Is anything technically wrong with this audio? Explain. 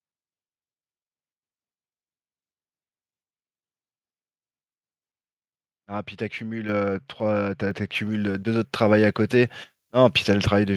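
Yes, the speech has two faults: an abrupt level jump and, later, an uncorrected treble boost.

At 6.69 s the microphone volume is stepped up. The call software judged the input too quiet and raised the device gain by about 6 dB in a single step, so the voice and the background noise both get louder at once. On a waveform the envelope widens suddenly at that instant, and on a spectrogram the whole frequency range, including the noise floor between phrases, brightens in one vertical edge.

From 7.95 s to the end, pre-emphasis is left on. The signal received a treble boost following the 50 µs FM curve, but the matching de-emphasis was never applied, leaving the highs about 10 dB too strong at 10 kHz relative to 1 kHz. The speech turns thin and bright, with exaggerated sibilance. A spectrogram shows the region above roughly 3 kHz becoming markedly more intense from that point, and the waveform looks spikier as high-frequency energy rides on top.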